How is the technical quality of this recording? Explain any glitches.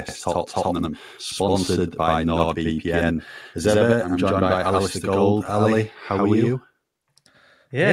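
The recording has one persistent fault: a channel delay (doubling) present from start to finish. One channel of the speech arrives about 85 ms behind the other, a lag that fits a 4096-sample buffer, and the two are then summed to mono. At that spacing the ear no longer fuses the copies, so every syllable is followed by a distinct second hit at equal level, heard as a slapback echo or a doubled, stuttering voice throughout.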